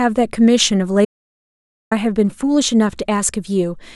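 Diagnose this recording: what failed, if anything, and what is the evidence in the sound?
Audio dropout to silence from 1.05 to 1.91 s: the speech cuts to silence for about 0.86 s, no room tone, likely an input link or device dropping out.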